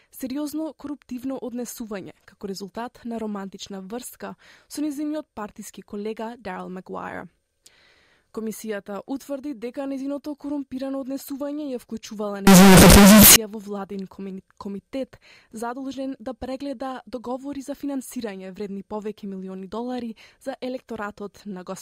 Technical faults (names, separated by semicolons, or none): signed and unsigned mixed up